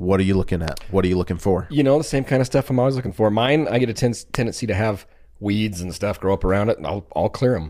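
It's a speech clip with two loud pops. The first comes at 0.68 to 0.70 s, right after "are you looking", and the second at 4.35 to 4.37 s, just before "to have weeds and". Each is a single sharp pop jumping roughly 15 and 20 dB above the speech, likely a voltage spike from a switch, plug or static discharge. At 3.06 to 3.10 s, just after "of stuff I'm always", there's a case of frames out of order. Two neighbouring blocks of about 26 ms play swapped, giving a quick garbled flutter.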